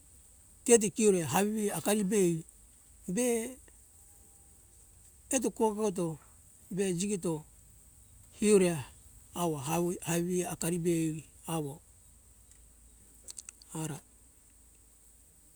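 Nothing in the speech recording points to a technical problem: the signal holds steady throughout, with no interruptions, level jumps or unexpected changes.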